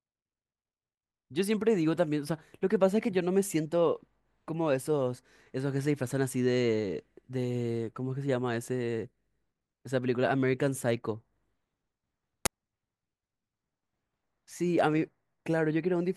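An uninitialised buffer plays at 12.46 s in this speech recording. One 10 ms block went out to playback before any audio had been written into it, so whatever stale values sat in that memory were treated as samples. The result is a brief, loud crack for that single block, with no relation to the surrounding sound.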